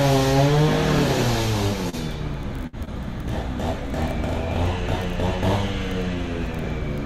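At 1.89 s there's a short concealed packet loss. About 40 ms of audio didn't reach the decoder in time, and the receiver patched roughly 34 ms of it by extending whatever sound was playing just before the hole, then crossfading back into the real signal. You hear it as a quick smear or tiny wobble rather than a clean gap.

At 2.67 to 2.75 s there's a burst of packet loss, a bigger hole of about 60 ms. The concealment carried the last sound forward across the whole gap and faded it down as it went, so what should be there turns into a held, dimming buzz or hiss. When the audio comes back, the material from that stretch is missing and the sound jumps ahead.

Right after that, at 2.85 to 2.89 s, there's another short concealed packet loss. This one is tiny, with about 20 ms lost and filled in the same way. It shows up as a brief smear or wobble just after the burst recovers.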